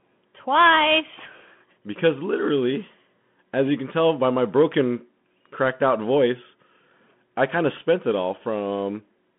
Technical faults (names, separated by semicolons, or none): Bluetooth CVSD headset codec